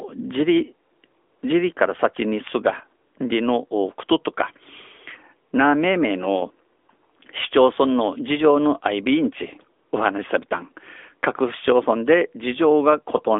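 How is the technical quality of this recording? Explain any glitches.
Technical quality is limited by one fault present for the whole recording: AMR narrowband mobile codec processing. The speech sits in a telephone band of roughly 300 Hz to 3.5 kHz, with nothing above 3.7 kHz. The codec models the vocal tract from a few pulses per short sub-frame, and at this bitrate the damage is plainly audible as a buzzy, synthetic edge, which fits an upper-range AMR-NB mode near 10 kbps. That coded, artificial quality is what separates it from a simple band-limit filter.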